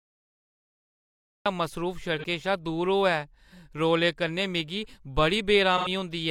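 A speech clip with a cut-off start and two patches of AAC frame loss with concealment. The first 1.46 s is digital silence. At 1.46 s the speech appears abruptly, already partway into a sound. There is no natural attack or fade-in. The recording or stream began late, so its opening was never captured, and the speech just jumps in from nothing. At 2.18 s a brief smeared, noisy patch, about 43 ms of lost audio, runs to 2.24 s. That fits one lost AAC frame. The decoder rebuilt the gap from the last good spectrum, so detail there turns blurry and phasey. A second, longer patch runs from 5.77 to 5.88 s, covering about 85 ms of lost audio. That points to two consecutive frames lost and concealed the same way.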